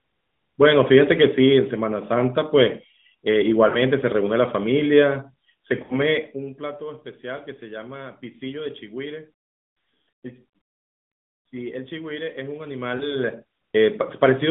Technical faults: lost AMR speech frames

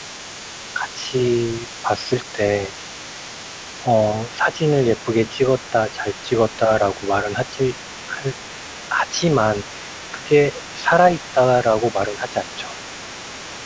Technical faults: other side's voice leaking through; speech suppressed in double talk

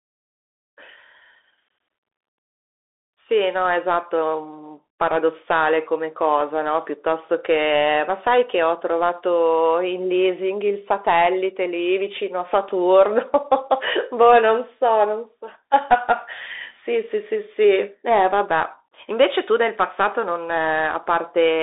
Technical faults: Bluetooth CVSD headset codec

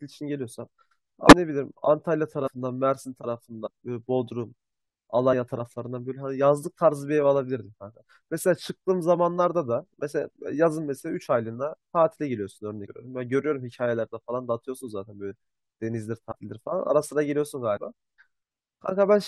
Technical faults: compressed frames skipped

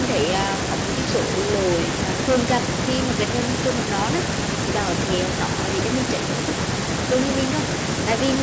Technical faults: none

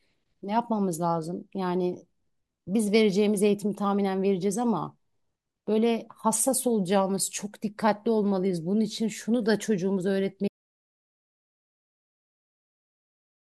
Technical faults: audio dropout to silence

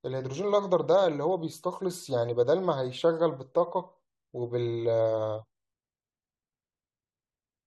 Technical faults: none

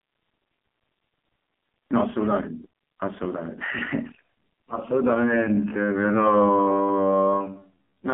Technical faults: AMR narrowband mobile codec; time-stretched section

